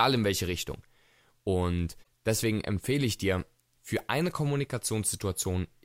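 At 2.0 s the speech is broken by a short glitch lasting about 70 ms, ending at 2.07 s just before "deswegen empfehle ich dir". This is damaged data in a compressed stream. Bytes in that stretch of the encoded file were lost or overwritten, so the decoder misread or refused the affected frames and lost its place. The blip ends once the decoder locks onto the next valid frame header and normal decoding resumes.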